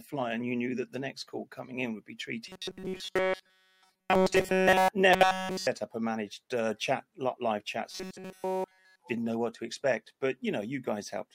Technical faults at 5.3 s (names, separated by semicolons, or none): robotic sound from repeated short buffers